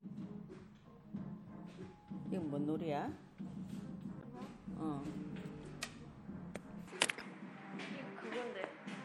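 Throughout, the sound has a watery, swirling texture with smeared attacks and a clipped top end, likely MP3 compression at a low bitrate such as 64 kbps, steady rather than sudden. From 4.19 to 4.24 s a brief glitch marks damaged data in a compressed stream, where the decoder lost its place and resynchronised. From 6.88 s to the end the tone turns abruptly duller, with nothing above 11.4 kHz, a level shift of roughly 5 dB and a faint new noise floor well below the signal. There is no gap at the change, and it points to an input switched to a poorer device, not codec filtering. Another short blip of damaged stream data follows at 7.18 to 7.22 s.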